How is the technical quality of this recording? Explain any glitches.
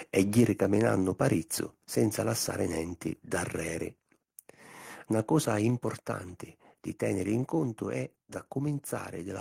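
The recording has a brief stretch of distortion at the very start, followed by two sudden drops in level.

From 0.18 to 0.4 s there is microphone overload, likely from the input volume being set too high. Peaks run about 2 dB past the converter's limit and around one percent of samples are flattened. Unlike codec distortion, the crackle appears only on the loudest moments.

Microphone volume stepped down at 0.4 s, by about 3 dB, and again at 1.41 s, by about 2 dB. Voice and background fall together in a single instant, likely because the call software cut the device gain after the overload. That clean step, rather than a gradual fade, sets it apart from automatic gain control riding the level.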